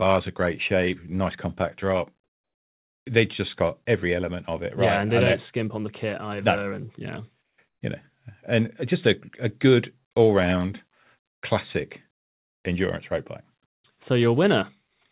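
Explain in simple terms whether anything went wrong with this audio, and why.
At 7.42, 7.68 and 13.74 s, pauses turn to smooth, quieter hiss rather than silence. This is likely comfort noise in place of the background.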